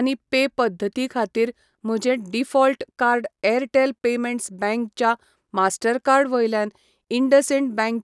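Speech recording with no audible technical fault anywhere in the signal.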